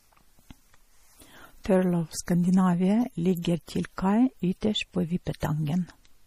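From start to finish the speech carries plainly audible damage of the kind MP3 compression leaves, likely from an encoder starved of bits, which fits a bitrate around 40 kbps. Nothing remains above 15.2 kHz, and the weaker frequency lines drop in and out between frames, giving a watery, swirling texture and chirpy s sounds. On a spectrogram the top edge is a flat wall at 15.2 kHz, with scattered flickering holes beneath it.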